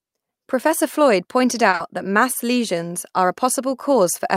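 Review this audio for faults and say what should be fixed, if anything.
At 1.69 s, just before "that mass lesions are", there's a short stall from a late packet running to about 1.75 s. The packet wasn't there when the decoder needed it, so the jitter buffer ran dry and the receiver held the last bit of speech for about 40 ms until the data turned up. Nothing is lost, but that sound hangs a touch too long, and everything after it lands 40 ms later than it should. A jitter buffer with a bit more headroom, or one that adapts faster when arrival times start drifting, would ride this out.

Right behind it, from 1.75 to 1.81 s and still just ahead of "that mass lesions are", comes a short concealed packet loss. About 40 ms of audio never reached the decoder in time, so the receiver covered the hole by extending what it had last and then blending back into the real signal. That 40 ms of the original is gone, and what you hear is a brief smear just before the phrase picks up. 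Forward error correction or a little redundancy in the stream would let the receiver rebuild that chunk instead of guessing.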